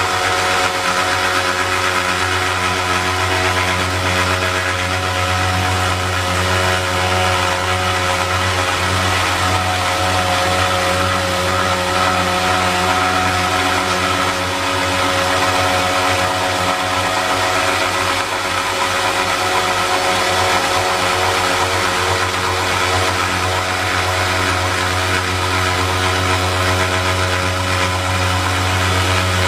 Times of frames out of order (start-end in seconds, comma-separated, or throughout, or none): 2.54-2.93, 24.32-24.71